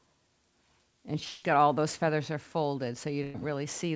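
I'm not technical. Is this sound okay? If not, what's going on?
No. At 1.24 to 1.44 s, about 0.18 s of audio is missing. The receiver papered over the gap by stretching the last sound into a fading buzz or hiss, and the audio then picks up further along. This is likely a long network dropout.

At 3.24 to 3.36 s there is a shorter gap of about 0.1 s, a burst of packet loss. Several chunks of audio never arrived in time, so the end of the preceding sound is held and faded, and the part in between is skipped.

Both gaps came through a call connection that carries nothing above 8 kHz.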